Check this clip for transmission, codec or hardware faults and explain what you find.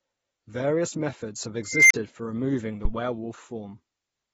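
Two faults are audible in this speech clip: a persistent codec dullness and a brief runaway tone.

Throughout, the speech sounds dull and smeared, with fizzy, warbling sibilants and missing upper detail. This is likely AAC compression, most plausibly AAC-LC at a low rate such as 24 kbps. At that rate the encoder lowers its bandwidth and quantises the spectrum coarsely, leaving holes or noise-filled bands. A plain low-pass filter would give clean dullness without that watery, shifting texture, so the texture itself points to the codec.

From 1.69 to 1.94 s an unstable filter is heard. A tone near 2 kHz swells over about 218 ms until it clips hard, then the audio drops out for about 35 ms before resuming. A recursive filter with bad coefficients feeds its own output back with growing gain, so the tone climbs without limit, overflows, and goes silent until the filter resets. Acoustic feedback would settle into a sustained howl, and a plain dropout would have no rising tone before the silence.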